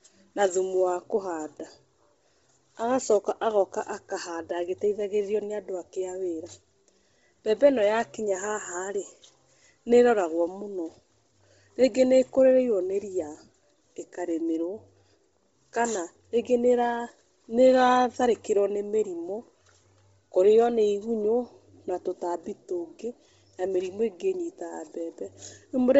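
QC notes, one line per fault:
Throughout, Bluetooth LC3 compression: the speech sounds breathy and grainy, with nothing above 7.7 kHz and the remaining top end smeared into hiss. This is likely heavy LC3 coding over Bluetooth LE Audio, which fits a 24 kbps stream in 7.5 ms frames.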